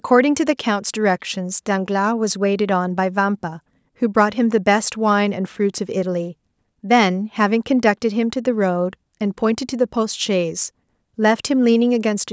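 No technical faults are audible.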